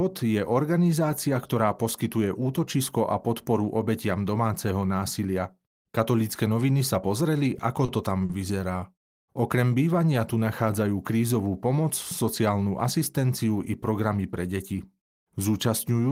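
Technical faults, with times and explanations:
7.85–7.89 s and 8.25–8.30 s, short stall from a late packet: a packet arrived late and the jitter buffer ran dry, so playback held the last sound for about 30 ms just before "to tam vyzerá" and about 40 ms just after "to tam", then resumed where it stopped.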